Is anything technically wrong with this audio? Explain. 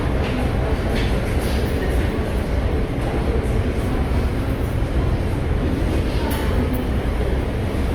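Yes. Opus compression runs throughout the clip and is plainly audible. It is likely the cause of the damage heard here. In its music mode the codec keeps each band's overall energy but, short of bits, fills band detail by folding in lower bands or substituting noise. Content still reaches about 20.3 kHz, so the bandwidth has not narrowed. Tonal parts come out grainy, rough and noisy rather than swirly, which fits a low rate around 24 kbps.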